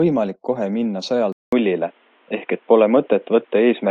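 At 1.32 s the speech drops out for 200 ms, then returns duller and boxier, with nothing above 3.8 kHz, a level shift of about 5 dB and a faint new background hiss. This most likely reflects the input switching to a poorer device, which holds until the end.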